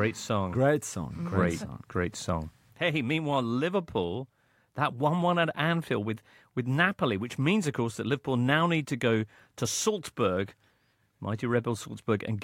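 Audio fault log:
No faults can be heard in the speech. There is nothing to log for any part of the recording.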